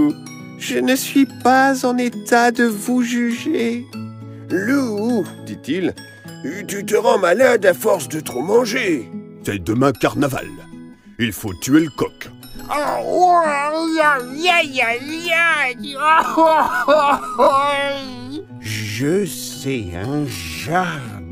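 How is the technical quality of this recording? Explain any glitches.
The recording has one clear glitch near the end. From 16.22 s to the end at 21.32 s there is a time-stretched section: the audio abruptly slows to about 0.57 times its pace while pitch stays unchanged. The likely cause is software lengthening the passage by repeating short fragments, which makes it drag. On a spectrogram, harmonics keep their frequencies while events spread wider; the waveform shows repeated grain patterns.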